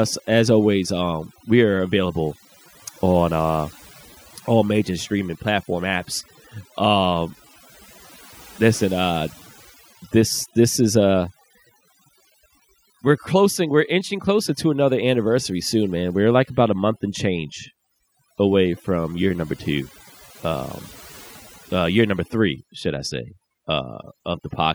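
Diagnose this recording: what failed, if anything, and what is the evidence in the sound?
The background sits at near silence scattered with twinkling specks for the whole clip. That is overdone noise removal at the processing stage: a noise reducer set too hard pulls individual bands down wherever they resemble its noise estimate, taking quiet speech detail with them.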